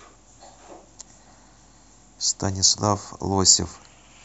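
No technical faults are audible.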